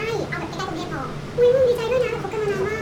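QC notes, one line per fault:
Throughout, wrong sample rate: speech runs 1.5 times fast and sounds about 7 semitones high, which fits 32 kHz audio played back at 48 kHz without conversion.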